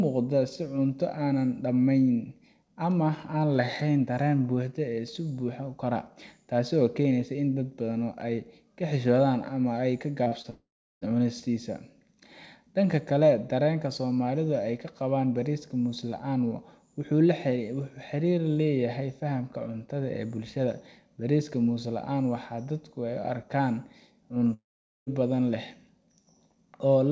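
Speech heard through a band-limited call path, with nothing above 8 kHz, which fits a wideband codec such as G.722, breaks up twice. Around 10.24 to 10.34 s and again at 10.42 to 10.46 s there are quick smears and wobbles, each a short concealed packet loss: roughly 20 ms, 40 ms and 20 ms of audio arrived too late, and the receiver patched each gap by extending the preceding sound before blending back. Right after, from 10.50 to 11.03 s, the sound stretches into a fading buzz or hiss and then goes silent for about 0.35 s, resuming with roughly half a second gone. The same happens from 24.53 to 25.08 s, with about 0.45 s of silence and about 0.54 s missing. Both are most likely a long network dropout, where nothing arrived, the receiver's continuation faded out, and the lost stretch was simply skipped.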